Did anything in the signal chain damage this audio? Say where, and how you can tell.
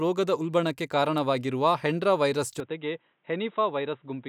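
Yes: an input switched to a poorer device at 2.6 s, and the speech stays degraded to the end. With no gap at the change, the sound abruptly turns dull and boxy, loses everything above 3.8 kHz, drops by about 5 dB, and picks up a different, faint background noise well beneath the speech. That combination points to the capture stage, likely a driver or operating-system switch to another microphone or a headset's narrowband call profile.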